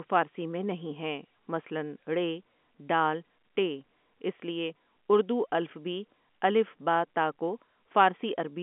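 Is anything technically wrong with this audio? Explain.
No, nothing in this speech clip stands out as a technical fault. It carries the narrow sound of G.711 telephone coding, with the line band running from about 200 Hz to 3.4 kHz and nothing audible above about 3.8 kHz, as expected on a fixed telephone line.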